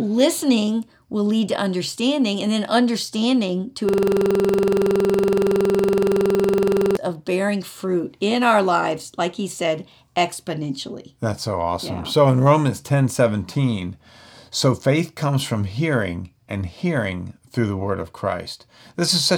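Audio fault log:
3.89–6.97 s, system hang loop: right after "and then understanding to", the speech freezes into one 46 ms fragment repeated 66 times, about 3.1 s of identical cycles, before resuming at "of bearing fruit in". The playback device kept recycling its ring buffer while the system stalled; a 46 ms loop fits a 2048-sample buffer and repeats at 21.5 Hz, giving a rough, rattling buzz. Unlike a dropout or stutter, every repeat is exactly the same.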